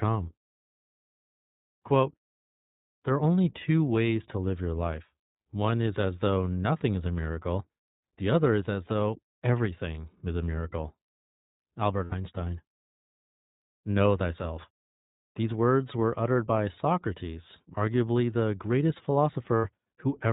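Throughout, the speech carries plainly audible iLBC codec damage. The band stops at 4 kHz, and each independently coded 20 ms frame leaves the voice slightly rough and synthetic, which fits iLBC's 15.2 kbps mode.

At 12.04–12.14 s and again at 19.57–19.66 s, just after "arguably the greatest", lost iLBC frames leave 80 ms gaps, consistent with four frames. The decoder fills each with a repeated pitch cycle plus noise, heard as a brief buzzy held vowel, and the voice is right again almost at once.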